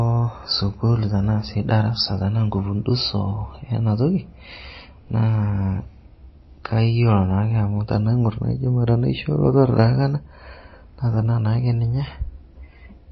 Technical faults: MP3 compression

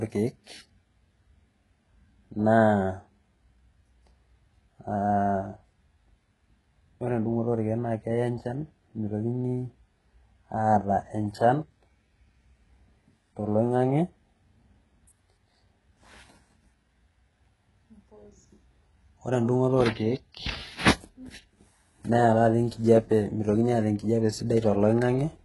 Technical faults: HE-AAC compression

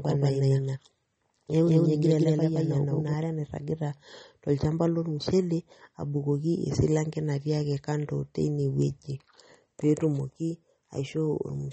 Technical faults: MP3 compression; doubled audio track

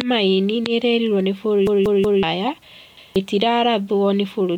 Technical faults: repeated buffer; corrupt frame decoded

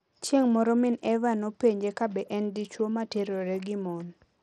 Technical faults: Bluetooth SBC compression

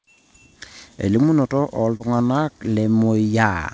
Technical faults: short concealed packet loss

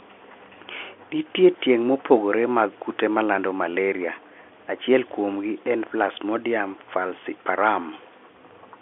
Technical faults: none

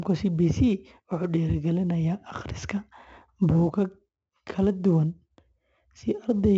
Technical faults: 4-bit ADPCM compression

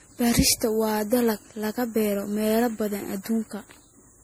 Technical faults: generation loss

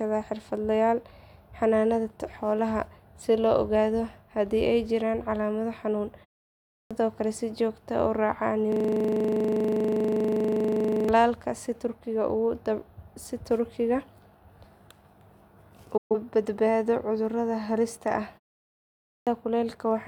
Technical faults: clipped start after a pause; system hang loop; digital broadcast dropout

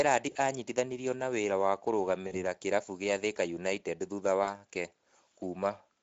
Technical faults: Speex codec; VoIP packet loss concealed by the speech codec

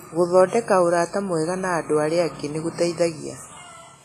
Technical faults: WMA compression

